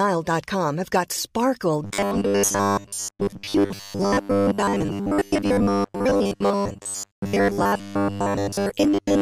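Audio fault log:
1.84–9.21 s, robotic sound from repeated short buffers: after "have got sparkle", new audio likely stops arriving often enough, so 10 ms stretches are replayed in place of most of the real signal. The repeats impose a rigid 100 Hz metallic buzz that only loosely tracks the speech.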